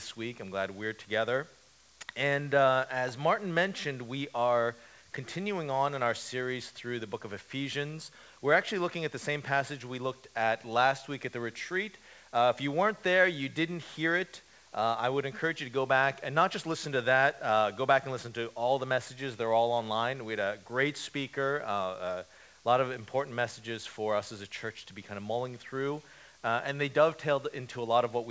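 No technical faults can be heard; the audio has come through a call path whose bandwidth stops at about 8 kHz, which fits G.722 wideband coding, and the only coding noise is what that codec normally adds.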